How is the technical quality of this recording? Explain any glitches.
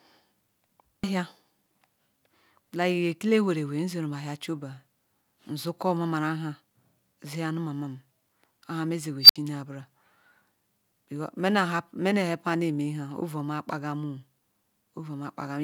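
The recording has one clear glitch, an unstable filter, from 9.22 to 9.36 s. A recursive filter ran away. A squeal near 5 kHz swells over about 77 ms, clips, then overflows. The sound drops out for 64 ms until the filter resets.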